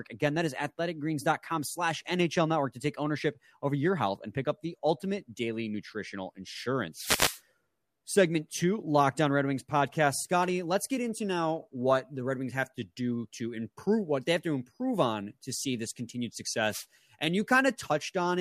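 At 6.94 s a short swish of static rises over the speech and lasts until 7.41 s, and a briefer burst follows from 16.70 to 16.86 s. Both are wireless microphone noise hits. The analogue FM radio link between the microphone and its receiver faded as reflected signals cancelled the direct one, so the receiver's own noise surged up before the signal recovered.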